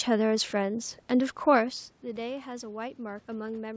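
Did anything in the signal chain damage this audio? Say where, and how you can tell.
No, nothing in the signal chain damaged this audio.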